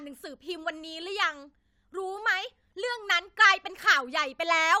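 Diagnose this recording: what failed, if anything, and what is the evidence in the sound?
Nothing failed here: the speech comes across without any break, glitch or distortion at any stage, so there's nothing to diagnose.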